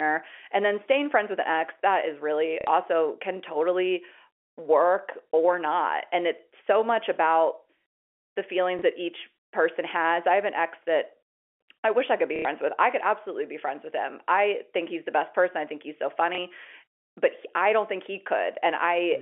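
At 2.61 to 2.67 s, 8.79 to 8.82 s, 12.36 to 12.45 s and 16.35 to 16.38 s, packet loss with last packet repeated loops a 30 ms slice. Longer runs buzz near 33 Hz, a robotic stutter rather than a silent dropout.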